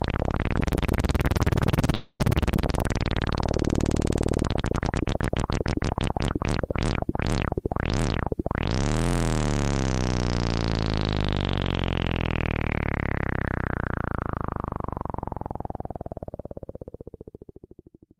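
From 1.94 to 2.21 s the audio breaks off and the last sound smears into a fading buzz or hiss for about a quarter second, then roughly 30 ms of silence before it resumes, with about 250 ms missing. This is likely a long network dropout. On a spectrogram it appears as a blurred, decaying band ending in a blank gap, and on the waveform as a shrinking envelope, then a flat line.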